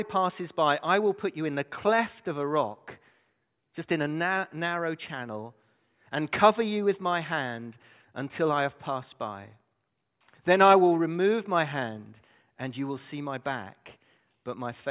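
No technical faults can be heard anywhere in the recording. The speech arrives without any break or disturbance from the signal chain.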